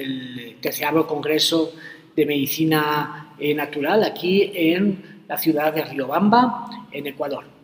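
No technical faults are audible.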